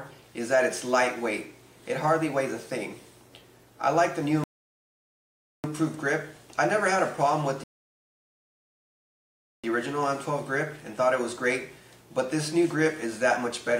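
At 4.44 s the audio falls silent for 1.2 s, and at 7.64 s for 2.0 s. Both are rebuffering stalls: playback ran out of downloaded data and waited, then resumed exactly where it stopped. Time is added but nothing is skipped, unlike a dropout.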